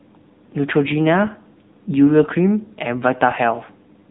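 AMR narrowband mobile codec damage runs throughout the clip. A phone coder rebuilt the speech from a vocal-tract model driven by sparse pulses, at a low rate that fits about 8 kbps. Nothing above 3.8 kHz remains, leaving a dull, plainly buzzy, synthetic voice.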